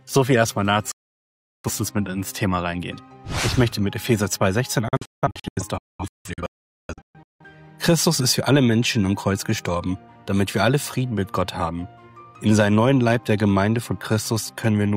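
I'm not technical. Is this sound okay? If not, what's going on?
No. There are two digital broadcast dropouts. At 0.91 s the sound snaps to silence and returns at 1.70 s, losing roughly 0.7 s. From 4.88 to 7.45 s it cuts out repeatedly in short holes, the longest about 0.43 s, with about 1.6 s missing in total. Each cut is an almost instant fade. The receiver stopped getting usable data and muted until good data came back, so whatever was sent during those gaps is gone.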